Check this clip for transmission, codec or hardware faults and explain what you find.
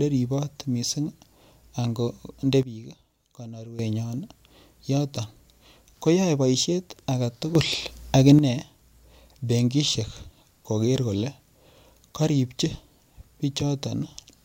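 Two sudden gain jumps are present. From 2.63 to 3.79 s, just after "ango nde", the speech and its background noise drop together by about 12 dB and then return to the earlier level. From 7.55 to 8.39 s, after "koyoei boishet age", both rise together by about 9 dB before settling back. Each is likely a digital gain change applied from one sample to the next with no ramp.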